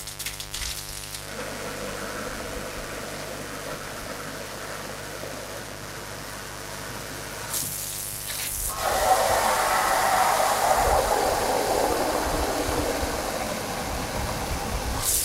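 Throughout the clip, a switching device or poor shielding lets sharp spikes from the 50 Hz mains in twice per cycle. This mains buzz is a steady, raspy drone with harmonics reaching into the kilohertz range. It sits only moderately below the sound itself.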